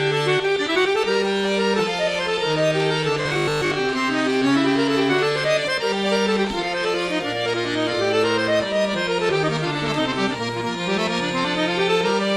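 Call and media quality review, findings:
Robotic sound from repeated short buffers, 3.22 to 3.78 s: rigid metallic buzz at 50 Hz, most of the sound replaced by loops. Likely cause: starved playout or jitter buffer repeating a 20 ms block. Fixed pitch sets it apart from dropouts or codec warble.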